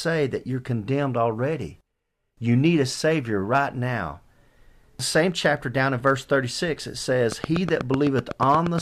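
Likely interference from nearby equipment injects a train of clicks from 7.32 to 8.79 s: roughly fifteen regular pulses, 8.2 per second, ticking well above the speech.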